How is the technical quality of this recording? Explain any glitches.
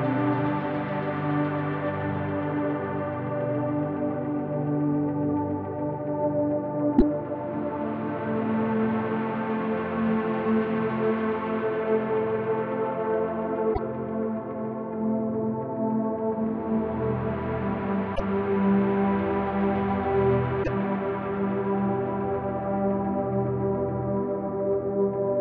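The recording has four short glitches from damaged data in a compressed stream, at 6.94–7.02 s, 13.70–13.79 s, 18.12–18.20 s and 20.60–20.68 s, each lasting about 80 ms. At these points corrupted frames left the decoder misreading the data until it regained sync, producing a brief chirp or squawk. On a spectrogram each appears as a narrow vertical block of smeared energy, and on the waveform as an abrupt discontinuity.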